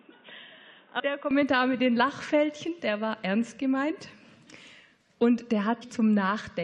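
For the first 1.31 s the audio is dull and boxy, with nothing above 3.8 kHz, a level roughly 10 dB lower and a noise floor about 30 dB under the signal, before it clears with no gap. That points to the input likely having been switched to a poorer device. An EQ change alone would not also alter the noise floor. Short glitches at 0.99 s and 5.81 s come from damaged data in a compressed stream. The decoder loses frame sync and searches for the next frame header.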